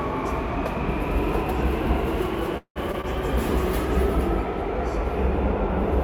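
At 2.57 s the everyday sound stops moving forward and a call audio freeze sets in until 2.78 s. The likely cause is packets held up in transit, so the jitter buffer ran dry and the receiver had to invent about 183 ms of audio. It carries the last sound on as a fading buzz or hiss, which thins to about 90 ms of silence before the real audio resumes. Nothing is lost, but the sound now runs roughly 183 ms later than before.

Two short concealed packet losses follow, at 2.92–2.95 s and 3.01–3.05 s. Each time about 20 ms of audio failed to reach the decoder in time, and the receiver patched the hole by extending what came just before and then blending back in. The result is a quick smear or wobble at each point.

From 3.09 s to the end the encoder appears to have been told to spend far fewer bits after the call's bandwidth estimate collapsed. This call bitrate drop sounds like a fall from around 128 kbps to about 17 kbps, with the lowest quality lasting about 1.02 s. 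Coarser coding makes the sound rough and watery, and the missing top end leaves it muffled.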